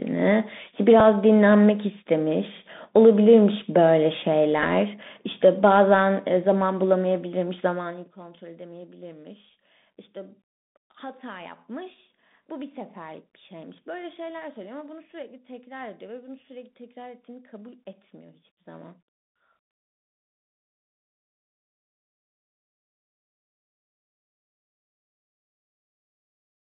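From start to finish the speech carries Bluetooth CVSD headset codec damage, plainly audible. The line spans roughly 150 Hz to 3.7 kHz, which fits a 64 kbps one-bit delta stream. Unlike a bandlimited phone codec, it adds a granular hiss beneath the speech, scratchy s sounds, and gritty distortion where loud high sounds outrun the adaptive step.

At 1.00 s a Bluetooth headset packet repeat gives a small tick. A lost 3.8 ms slot was refilled by decoding the previous packet's bits again. The sound never drops to silence, which sets it apart from a dropout gap.

At 4.63 s a second packet repeat covers about 7.5 ms, which points to two consecutive lost slots replayed at the 3.75 ms packet spacing.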